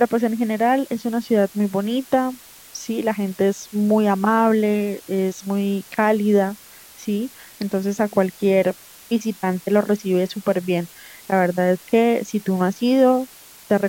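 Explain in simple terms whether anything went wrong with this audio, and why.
Yes, something went wrong: a steady, even hiss sits under the speech from start to finish. That is low bit depth with dither. The audio was stored with very few levels, which fits about 7 bits, and added dither turns the rounding error into fairly loud constant noise instead of distortion.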